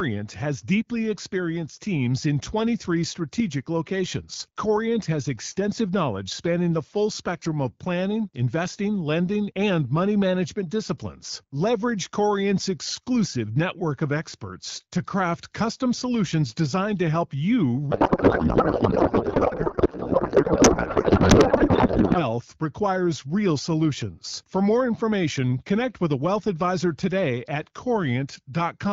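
Speech clip over AMR wideband at what sounds like 12.65 kbit/s. From 17.91 to 22.20 s, after "help you" and until "requires real solutions", there's a codec payload misread. Octet-aligned AMR frames are being read as bandwidth-efficient, so the decoder pulls fields from the wrong bits and outputs garbled warbly noise.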